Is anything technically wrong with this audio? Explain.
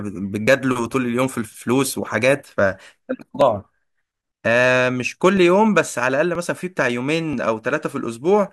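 Yes. The speech skips briefly at 0.47, 2.43, 3.41, 5.37, 6.35 and 7.33 s. Each skip drops about 20 ms. The near one-second spacing points to audio missing between chunks. A slice is likely lost at each one-second chunk boundary, and the two sides join directly.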